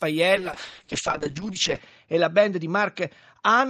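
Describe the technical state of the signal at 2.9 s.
At 2.9 s the speech sounds rough and muffled. A call bitrate drop from 0.36 s onward forced coarse 6 kbps coding, cutting bandwidth to 8 kHz.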